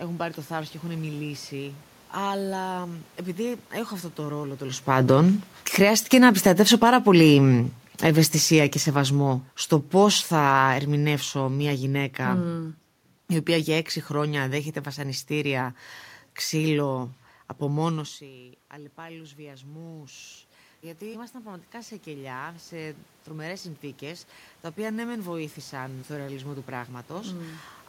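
A speech recording with two automatic gain faults. After "αυτό το ρόλο τέλο", around 4.5 s, the talker comes closer and the level jumps. At 4.75 s automatic gain falling begins. The gain control judges the input too loud and lowers its gain by about 15 dB, slowly, until 17.97 s. Voice and room noise sink together. At about 18 s the talker moves away and the input drops by about 20 dB. Automatic gain rising follows from 18.0 s to 27.67 s. The control now finds the input too quiet and lifts its gain by about 15 dB. The voice swells back gradually, and the room noise rises with it.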